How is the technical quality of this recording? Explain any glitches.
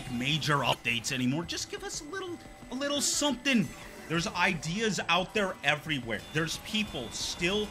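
The recording has two short decoding glitches and a steady high-pitched whine from early on.

Damaged data in a compressed stream, at 0.71 to 0.75 s and again at 6.57 to 6.61 s: corrupted bytes make the decoder lose frame sync and search for the next frame header, leaving a brief glitch each time.

USB whine, from 1.44 s to the end: current drawn in 125-microsecond USB microframes leaks into the audio path, producing a fixed tone at 8 kHz, strongest at 16 kHz, roughly 35 dB below the main sound.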